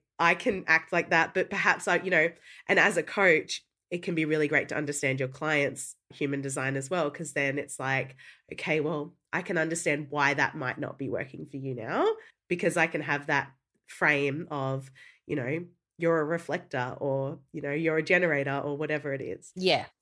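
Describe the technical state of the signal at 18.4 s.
At 18.4 s the speech signal is intact, with no audible fault at that moment.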